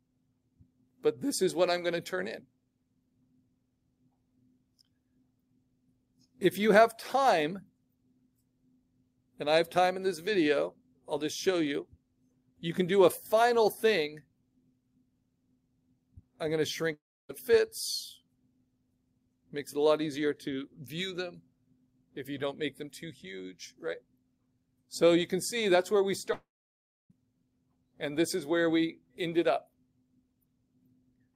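Long network dropouts, likely, at 16.93 to 17.31 s and 26.33 to 27.12 s: the last sound smears into a fading buzz, then near-silence (about 0.3 s and 0.66 s), before audio resumes with roughly 0.36 s and 0.78 s of material missing.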